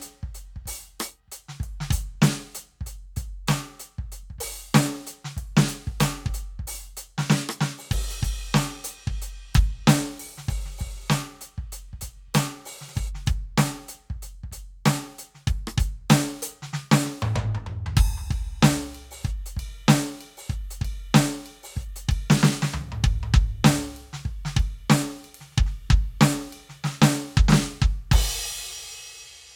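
Nothing is technically wrong with this music clip.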